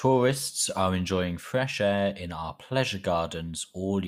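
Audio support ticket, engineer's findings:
Call bitrate drop, 0.35 to 1.65 s, ending just before "air in our pleasure". Sound turns rough and watery and muffled, which fits the encoder falling from about 64 to 28 kbps, held at the low rate for about 1.2 s. Probable component: sender bandwidth estimator throttling the Opus encoder. Spectrogram: upper band thins out, with smeared, blocky texture in place of fine harmonic detail. Full bandwidth returns after 1.65 s.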